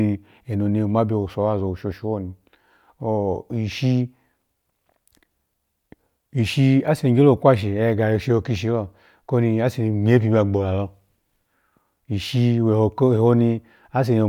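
Nothing technically wrong turns up anywhere in this speech recording, so there's no fault here to point to.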